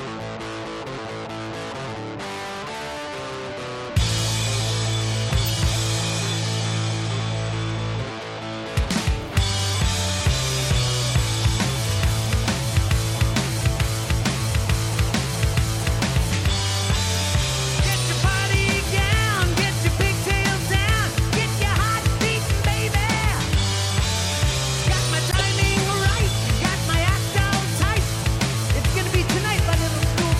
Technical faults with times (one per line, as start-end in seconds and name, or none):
5.46-5.48 corrupt frame decoded
15.55 corrupt frame decoded
17.92-17.94 corrupt frame decoded
19.61 corrupt frame decoded
25.31-25.41 corrupt frame decoded
28.33 corrupt frame decoded